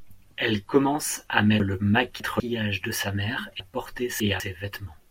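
Speech with two chunks out of order, at 1.6 to 2.4 s (after "commence à", resuming at "de sa mère") and at 3.6 to 4.4 s (after "de sa mère"). In each, a 200 ms block plays three blocks late, so the 0.8 s span sounds jumbled, with three hard joins. A spectrogram shows formant tracks breaking and reappearing out of sequence at 200 ms boundaries, and the waveform shows abrupt discontinuities at each join.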